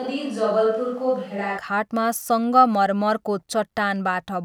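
From the start until 1.57 s, the close microphone's feed is likely missing, so the recording falls back on a distant microphone. The speech sounds roomy and hollow, thinner in the bass, roughly 5 dB quieter, with faint room noise, then snaps abruptly back to close sound.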